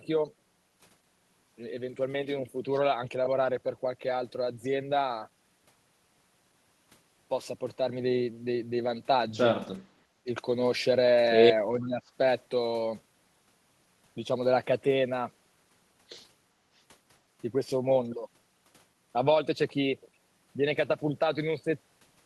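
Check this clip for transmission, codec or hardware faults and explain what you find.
Two faults occur together in one short stretch of this speech clip.

Speech suppressed in double talk, 11.78 to 12.11 s: the voice sinks by about 15 dB over roughly 300 ms. Likely cause: with both sides talking at once, the echo canceller mistook this talker for loudspeaker echo and turned the speech down.

Echo leak, 11.82 to 11.87 s: a very faint scrap of the voice returns, around 35 dB below the speech, trailing it by 430 ms. This is likely the far end's echo canceller failing to remove all of its loudspeaker sound, sending a delayed fragment back.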